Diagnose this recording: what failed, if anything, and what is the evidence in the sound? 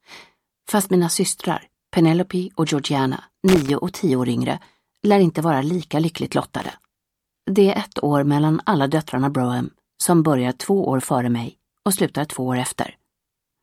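Loose connector crackle, from 3.48 to 3.70 s and again from 6.62 to 6.74 s, places the failure in the analogue wiring. Each event is a short, irregular burst of scratchy crackle, about 0.22 s and then about 0.12 s long, rather than a clean click. A worn or dirty contact is making and breaking as it shifts, chopping the signal on and off many times in quick succession, with any DC on the line adding pops at each break.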